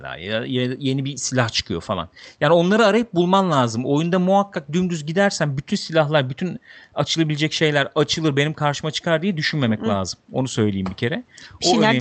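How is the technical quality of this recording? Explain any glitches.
No glitches are audible; the speech carries only the normal band limit near 8 kHz and the light coding texture of an Opus call path at 32 kbps.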